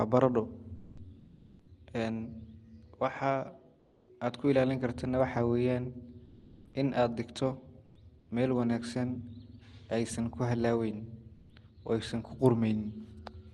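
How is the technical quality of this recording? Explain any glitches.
The recording has two related transmission glitches, both from the sender's voice detection.

Sound dropped by the voice detector, 0.75 to 0.97 s: the sender's voice detector, likely Opus DTX, misjudged ongoing speech as background and stopped sending. About 0.14 s of real speech is lost, replaced by steady noise until transmission resumes.

Comfort noise in place of the background, at 1.19 to 1.67 s, 3.79 to 4.07 s, 6.25 to 6.73 s, 7.85 to 7.95 s, 8.19 to 8.29 s and 11.35 to 11.49 s: during pauses the sender likely halted transmission, and the receiver synthesised filler noise. The real room tone turns flat and featureless, dropping by up to about 9 dB at 8.2 s.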